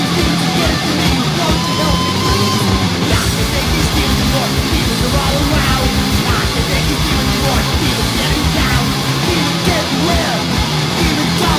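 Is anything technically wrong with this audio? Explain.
No, there are no technical faults.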